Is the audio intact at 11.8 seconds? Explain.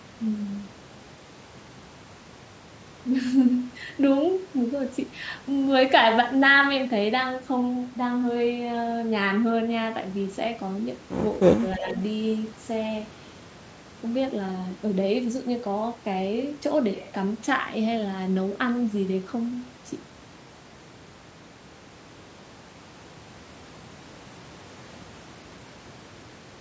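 No. From 11.55 to 11.95 s, speech is suppressed in double talk: the echo canceller likely turned both sides down, so the voice dips by around 20 dB.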